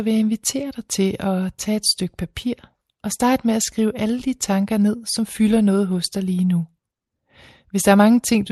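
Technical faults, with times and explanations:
Nothing goes wrong in this one; the speech just comes through an ordinary call connection, its top end easing off around 12 kHz the way you'd expect from an Opus call doing its normal job.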